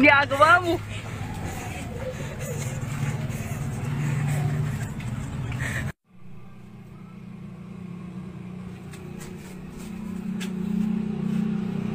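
No technical faults can be heard anywhere in this audio.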